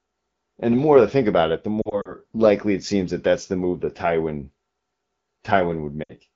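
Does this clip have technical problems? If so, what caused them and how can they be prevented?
Yes. Radio errors corrupted AMR speech frames. The decoder filled the gaps by repeating the last good frame with falling gain, causing lost AMR speech frames heard as brief warbling dips. This happens between "think about it the" and "likely it seems that" (1.81 to 2.14 s) and again at 6.03 to 6.14 s. Better radio coverage or stronger channel error protection would prevent it.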